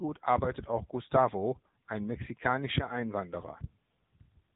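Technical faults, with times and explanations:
Throughout, AMR narrowband mobile codec: the speech has that flat, boxed-in phone-call sound, with nothing above about 3.8 kHz, so the sibilants and air are gone. It also has a plainly audible buzzy, synthetic edge. The codec rebuilds the voice from a vocal-tract model driven by 2 to 10 pulses in each 5 ms, and at this level of damage the sound points to a mode around 8 kbps.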